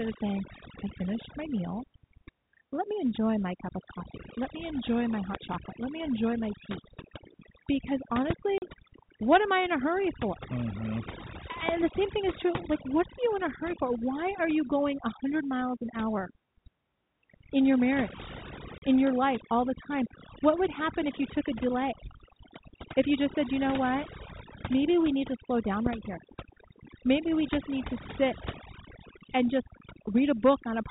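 Throughout the speech, the background sits at near silence sprinkled with faint twinkling specks, and the voice has its quieter edges eaten away. This is overdone noise removal: a noise reduction stage set too aggressively pulls individual frequency bands down or out whenever they come close to its noise estimate, so low-level parts of the voice vanish together with the hiss. The narrow telephone band of the G.711 coding is audible underneath this.

At 5.35 to 5.37 s, just after "me enjoy my", a sharp loud pop cuts in, standing roughly 15 dB above the speech. A similar single pop follows at 8.30 to 8.33 s at about the same level.

At 8.58 to 8.62 s, the speech drops out in a 40 ms hole with hard edges. This is packet loss filled with silence, which fits two lost packets of about 20 ms each that the receiver replaced with nothing.

At 11.69 to 11.71 s comes the strongest pop, around 20 dB above the speech.

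At 18.78 to 18.82 s, between "in your marriage" and "in your life all", a second 40 ms silent gap breaks the speech with the same abrupt edges, again consistent with two missing packets.

At 25.86 to 25.89 s, right after "need to slow down", a last pop lands, again about 15 dB over the speech. Each loud pop is a brief percussive burst on top of the speech, which carries on underneath. The likely cause is a sudden voltage step or pulse, such as a switch, a connector, static discharge or a driver glitch, entering the signal chain.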